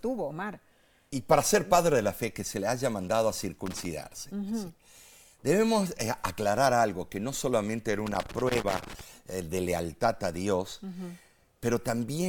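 Loose connector crackle at 3.66–3.86 s after "le haya mandado a" and 8.06–9.01 s before "eh de lealtad a": an intermittent contact chops the signal into irregular scratchy bursts.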